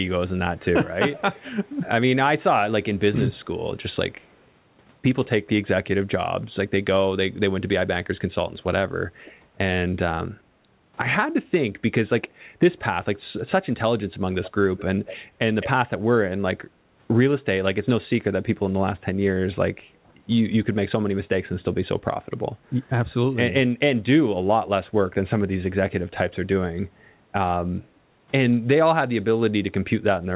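Echo leak appears at 1.16–1.72 s, 3.35–3.46 s, 4.2–4.43 s, 14.43–14.5 s, 14.77–14.84 s, 15.06–15.17 s and 15.61–15.7 s. A separate copy of the sound trails by about 0.21 s, from roughly 40 dB to 10 dB down, loudest near 15.6 s. Unlike room reverberation, it is a distinct delayed repeat, not a smear. Its likely cause is loudspeaker pickup that the far end's echo canceller missed.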